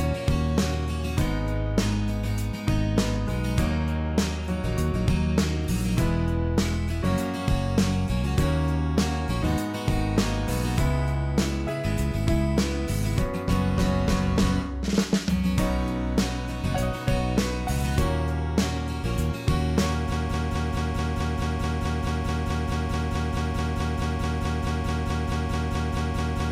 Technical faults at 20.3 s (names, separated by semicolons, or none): broken-record loop